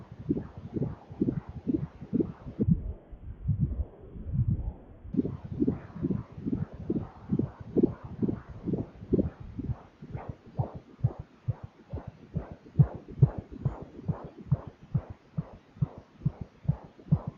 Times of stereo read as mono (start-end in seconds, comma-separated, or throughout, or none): 2.63-5.13